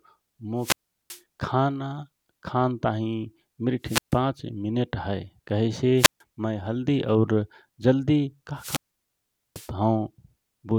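It's a speech clip with four wireless microphone squelch dropouts. Each one's the classic pattern: the FM link fades, hiss swells briefly, the receiver's squelch shuts the output, and the audio comes back. They hit at 0.58–1.22 s (about 0.38 s muted), 3.83–4.19 s (0.14 s), 5.97–6.21 s (0.14 s, just before "मय हल्दी"), and the worst at 8.55–9.71 s, where the hole runs about 0.79 s.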